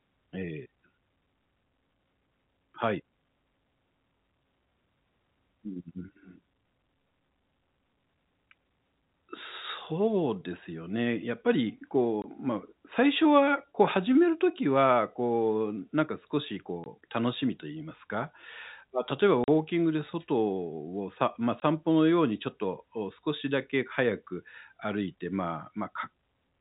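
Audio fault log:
12.22–12.24 s, 16.84–16.86 s, 19.44–19.48 s, 21.60–21.62 s: packet loss filled with silence. The receiver got no data for these stretches and put plain silence in their place. Three holes last 20 ms and the one at 19.44 s lasts 40 ms, which fits 20 ms packets with two dropped in a row. The speech abruptly cuts out and comes back, with hard edges at each hole against the band-limited telephone sound.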